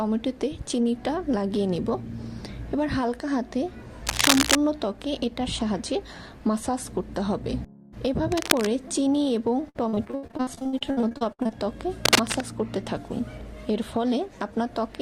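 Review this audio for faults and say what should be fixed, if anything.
Bursts of scratching, rustling noise sit over the sound at 4.07 to 4.58 s, 8.32 to 8.67 s and 12.05 to 12.35 s. They run slightly louder than the signal, or about level with it at 8.3 s. This is likely cable scratch noise, from a worn cable or connector whose contact resistance jumps as it moves. Replace or clean the suspect cable and connectors, and secure them so they cannot shift.

From 9.69 to 11.51 s the sound turns choppy and robotic. This is repeated packet loss. Dozens of short holes follow one another, the longest about 76 ms. Each is patched by stretching the previous sound, so about 42% of the stretch is concealed. Use a more stable network link with a larger jitter buffer.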